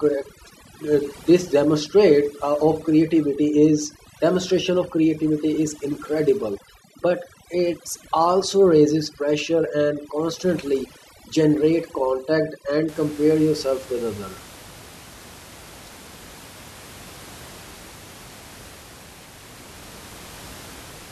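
From the start to 12.88 s, overdone noise removal is heard. The reduction was set too strong, so bands near the noise estimate are cut. Quiet parts of the speech vanish with them. The background drops and breaks up into twinkling specks. It clears before "compare yourself with other", where room noise sits about 21 dB below the speech.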